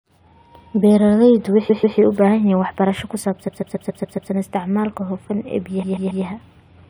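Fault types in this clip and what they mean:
Repeated frames: at 1.68 to 1.96 s, 3.47 to 4.31 s (after "waxbarasho ku") and 5.82 to 6.24 s (after "isticmaalka hufan"), the same 139 ms stretch of compressed speech is decoded again two, six and three extra times. This produces a stutter that adds 0.28, 0.84 and 0.42 s.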